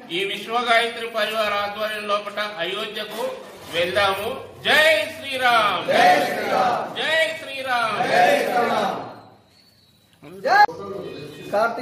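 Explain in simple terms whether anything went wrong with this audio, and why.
Nothing went wrong here.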